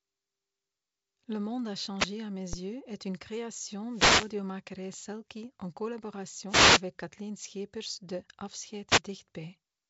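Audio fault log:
1.98–9.01 s, wireless microphone noise hit: four bursts at 1.98–2.08 s (just after "monde a"), 3.89–4.35 s (just after "yeux est une création"), 6.48–6.83 s and 8.88–9.01 s. Each is a swish of static over the speech as the radio link fades and receiver noise rises. On a spectrogram each shows as a broadband noise patch. It stops at the same ceiling near 7.7 kHz as the G.722-coded speech, so the noise passed through the wideband telephone coding.
2.53 s, DC step: just before "yeux est une création" the waveform's zero line jumps suddenly. This is heard as a single low thump, and the speech carries on unchanged. The offset does not hold. It relaxes back toward zero over a few tens of milliseconds, which fits a DC-blocking high-pass around 20 Hz draining it away. On the waveform this appears as a vertical shift followed by an exponential slope back to the centre line. On a spectrogram it is a faint smudge at the very bottom.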